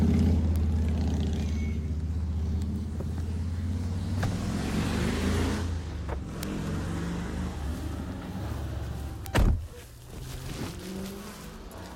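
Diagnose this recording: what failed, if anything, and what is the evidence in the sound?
Bit error spikes from the digital path, in storage or on a digital link, produce three isolated sharp ticks at 0.56 s, 6.43 s and 9.26 s, peaking at about -14, -8 and -8 dBFS. Each lasts one sample, except the two-sample one at 6.43 s. A flipped bit makes a sample jump by a power of two and snap back, unrelated to the surrounding audio. The waveform shows lone vertical needles, and the spectrogram shows thin full-height lines.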